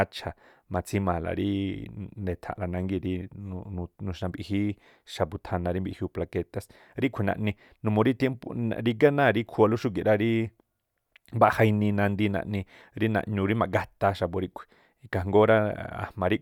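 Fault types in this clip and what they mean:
Nothing to flag here: this bit of speech comes through without any technical faults to report.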